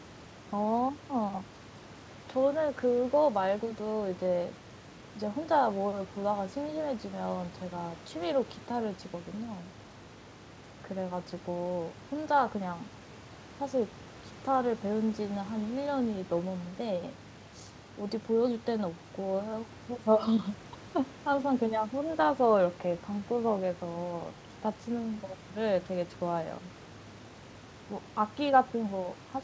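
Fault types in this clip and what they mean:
No faults in this clip.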